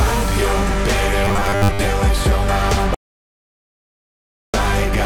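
From 1.25 to 1.85 s the sound turns into a rigid, metallic buzz at 100 Hz: robotic sound from repeated short buffers, likely from audio arriving too late so that a 10 ms slice was looped while most of the real audio was skipped. A spectrogram shows evenly spaced harmonic stripes of 100 Hz.

From 2.95 to 4.54 s an audio dropout to silence cuts everything for about 1.59 s, with no room tone, likely from the input being lost while zeros kept being written. The waveform is a flat line, and the spectrogram is a blank gap.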